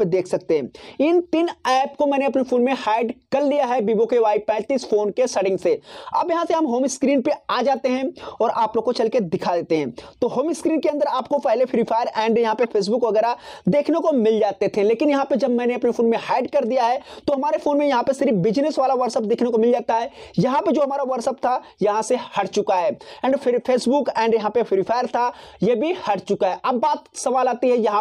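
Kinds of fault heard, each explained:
Corrupt frame decoded: a few compressed frames arrived with flipped bits and the decoder played them anyway, so energy lands at wrong frequencies. Here that's a brief, fairly loud blip or squeak from about 12.63 to 12.66 s that doesn't belong to the surrounding sound.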